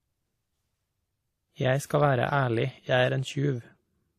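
A speech clip with transcoding between lossy codecs throughout: nothing above 15.1 kHz, plus two layered kinds of smeary, swirly coding artefact. A spectrogram shows a hard flat ceiling at 15.1 kHz with blotchy gaps beneath. This is likely AAC re-encoded as WMA.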